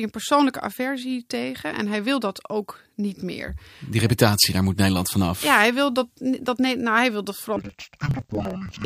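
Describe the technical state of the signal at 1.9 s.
The audio is intact at 1.9 s, with no fault audible at that moment.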